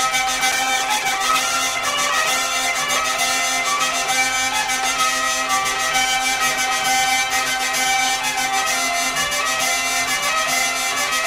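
At 0.52 s a call bitrate drop begins and lasts until about 5.04 s. The connection's bandwidth estimate fell, so the encoder had far fewer bits to spend. Coding turns coarse. The sound goes rough and watery, and the top end is cut away, leaving it muffled. The worst stretch holds for about 1.7 s. The dullness fits a fall from roughly 128 kbps to near 15 kbps. Clarity returns as the bitrate recovers.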